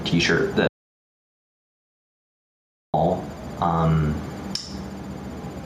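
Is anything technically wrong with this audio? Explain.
Yes. Gain pumping runs through the whole clip: the input gain is likely set far too high, so a fast limiter keeps clamping down on every loud sound and releasing between them. The level swings by roughly 10 dB, and loud and soft passages sit unnaturally close together, giving a squashed, breathing quality.

An audio dropout to silence runs from 0.67 s to 2.94 s, about 2.26 s in all. The input signal was lost, likely through a disconnected device, failed link or accidental mute, while the recorder kept writing silence. The sound cuts off abruptly and resumes just as abruptly, and the gap is dead silence with no room tone, so whatever happened in that stretch is simply gone.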